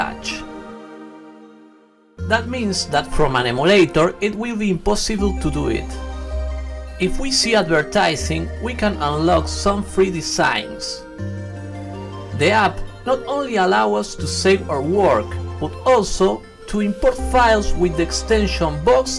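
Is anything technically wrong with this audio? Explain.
No, nothing technically wrong can be heard in this audio. There is no fault to point to at any moment in the recording.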